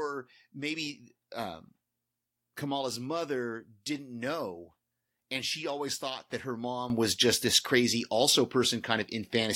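At 6.9 s a sudden gain jump raises speech and background noise together by about 11 dB until the end, likely from a gain change applied without a ramp.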